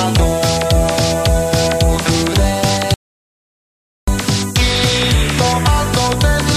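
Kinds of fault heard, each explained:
Audio dropout to silence: from 2.94 s to 4.08 s the sound cuts off in mid-flow and a gap of about 1.14 s follows with no room tone at all, before the audio resumes just as abruptly. The input signal was likely lost for that stretch, whether through a disconnected device, a failed link or a stray mute, while recording carried on writing silence, so whatever occurred during those 1.14 s is missing.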